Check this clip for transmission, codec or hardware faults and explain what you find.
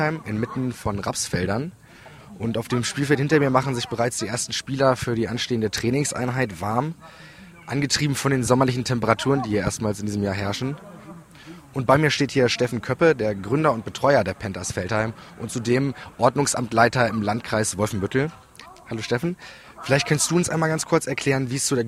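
Nothing turned up here: no dropouts, glitches or damage from the link, encoder or equipment anywhere in the recording.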